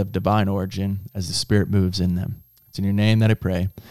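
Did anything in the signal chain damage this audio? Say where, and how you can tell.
Yes. A switching supply whistle runs throughout the speech, a faint high tone wandering between about 12.2 and 13.2 kHz, roughly 35 dB below the speech. The analogue stage picked it up from a switch-mode power supply, whose audible burst-mode oscillation shifts pitch as the load varies.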